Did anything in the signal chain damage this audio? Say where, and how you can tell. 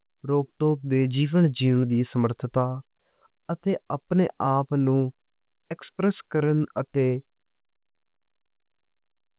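No, nothing in the chain has damaged this speech: the band stops at 4 kHz, consistent with a narrowband call path such as a G.711 A-law connection at 64 kbps working as designed, and nothing audible points to trouble at any stage.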